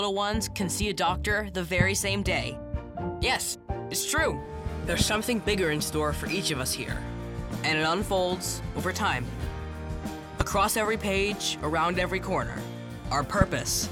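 Four loud pops, at 1.81–1.83 s, 5.01–5.04 s, 10.41–10.43 s and 13.41–13.44 s, each a single sharp snap jumping well above the sound, the one at 5 s a bit softer. Likely voltage spikes from a plug, switch or static.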